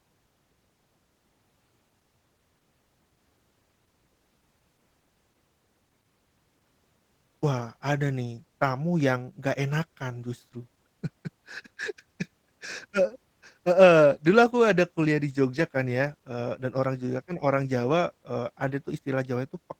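Throughout this speech clip, the voice sounds hoarse and slightly robotic, with plainly audible Opus voice compression damage. The coarsely coded excitation fits a low bitrate of around 16 kbps, with Opus splitting the band between its speech coder and a layer above 8 kHz.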